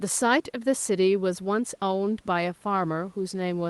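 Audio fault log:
No faults heard.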